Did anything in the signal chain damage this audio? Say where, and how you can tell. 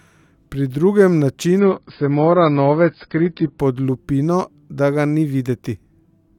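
Yes. The damage is at the network stage, where the adaptive stream switched to a lower bitrate. From 1.59 s to 3.59 s the speech loses its top end abruptly, with nothing above 5.2 kHz, and codec artefacts rise. The change is instant, with no gap, and quality snaps back just as suddenly. That fits the player dropping from about 96 kbit/s AAC to about 16 kbit/s while the connection slowed. At that rate, the encoder discards the treble to save bits.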